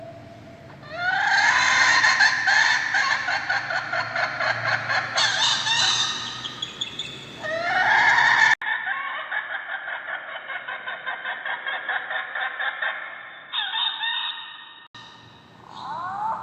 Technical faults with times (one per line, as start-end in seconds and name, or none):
8.54-14.95 input switched to a poorer device